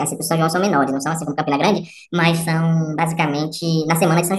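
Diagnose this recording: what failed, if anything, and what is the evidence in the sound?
The fault is a wrong sample rate at the playback stage. For the whole clip the speech runs 1.5 times too fast and sits about 7 semitones high, with pitch and tempo shifted together. That fits 32 kHz material clocked out at 48 kHz without resampling.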